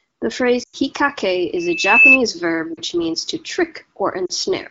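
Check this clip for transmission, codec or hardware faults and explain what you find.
There are two problems in the speech: dropped AMR frames and a feedback squeal.

Lost AMR speech frames hit at 0.63 to 0.77 s, 2.74 to 2.80 s just before "means to", and 4.26 to 4.32 s. Failed frames get patched by repeating old parameters with falling gain, so the sound quickly fades to near silence. The first gap is about 100 ms, which fits roughly five lost frames, and the later two are about 40 ms each.

The loudspeaker feedback squeal runs from 1.56 to 2.19 s. The microphone hears its own loudspeaker, and a 2.6 kHz tone swells over about half a second to roughly 10 dB above the speech.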